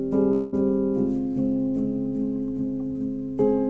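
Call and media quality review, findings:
Long network dropout, 0.32 to 0.54 s. Likely packet loss on the call path: about 200 ms of audio never reached the receiver, and the jitter buffer covered the gap by stretching the last received sound for roughly 0.2 s. Heard as a smeared, fading buzz across the gap with no hard silence, then the audio resumes with that stretch lost. The top end stops near 8 kHz, which fits the G.722 path at 64 kbps.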